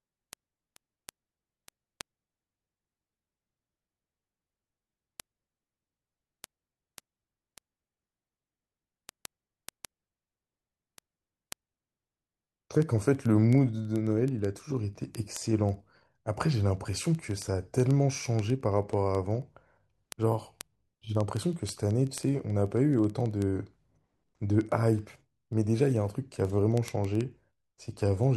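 From 0.12 s to 28.34 s, word clock ticks run through the speech at a steady rate of roughly twenty a second. A receiver not locked to the sender's clock, off by a few hundred ppm, slips one sample at each tick. Their even spacing separates them from random crackle.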